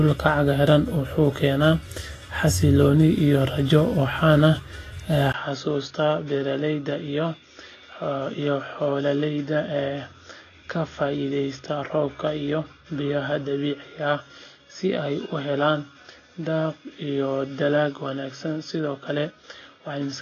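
From the start, the speech sounds hissy and grainy, with roughened tones and softened consonant attacks. This is likely Vorbis compression at a low setting, consistent with a bitrate near 27 kbps. A spectrogram shows nothing above 14.2 kHz and speckled, noisy treble in place of fine detail.

At 5.32 s there is a 20 ms gap, and the sound turns duller and a few decibels quieter through to the end, with a faint new noise floor well below the speech. This likely marks an input switched to a poorer device. The spectrogram's upper band stops at 6.7 kHz from that point, and the waveform's envelope steps down.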